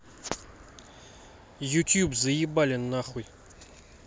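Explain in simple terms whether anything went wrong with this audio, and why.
Nothing went wrong here: listening through the speech, no dropouts, glitches, distortion or timing faults turn up anywhere in the recording.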